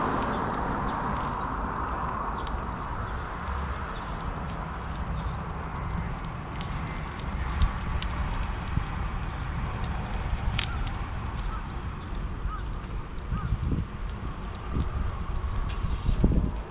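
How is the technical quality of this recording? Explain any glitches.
Nothing to report: no dropouts, clicks, distortion or timing faults are audible anywhere in the recording.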